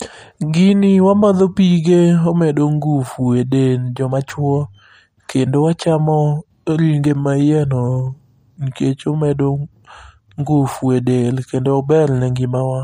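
From start to end the speech carries plainly audible MP3 compression damage, likely from a low-bitrate encode that fits about 48 kbps. A spectrogram shows a hard ceiling at 15.3 kHz, with weak upper detail flickering between frames, heard as a watery, swirly haze.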